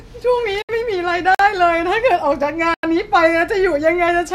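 At 0.62 s the receiver stopped getting usable frames, either because the signal was lost or because frames failed their checksum, so it muted until good data returned at 0.70 s. This is a digital broadcast dropout. The speech falls away through a quick fade of about 8 ms and stays silent for roughly 64 ms, which fits two lost frames. What was sent in that gap never arrives.

Twice more, at 1.35 to 1.39 s and at 2.74 to 2.83 s, samples in the output were replaced by zeros, most likely because the program did not fill its buffer in time. These are blocks of digital silence, lasting about 47 ms and 93 ms; the longer one fits a 4096-sample buffer. With no fade, the speech cuts straight to silence and back, leaving a short hole.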